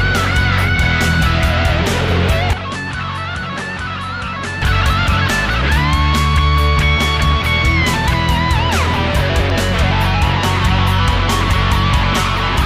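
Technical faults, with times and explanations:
2.53 to 4.62 s, input switched to a poorer device: the recording likely moved to a lesser input, so the sound drops about 10 dB, loses everything above 11.4 kHz and picks up a faint new noise floor, turning duller with no gap at either switch.
9.50 to 9.90 s, CD scratch ticks: a surface blemish wiped out more data than error correction could restore on successive disc turns, so the player patched or muted the samples, leaving three brief ticks, each under a millisecond, roughly five per second.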